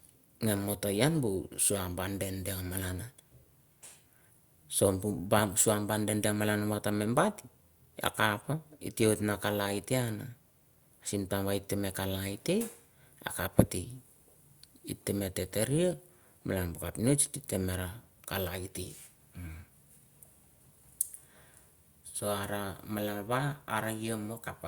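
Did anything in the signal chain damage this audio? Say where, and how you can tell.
No, nothing in the signal chain damaged this audio.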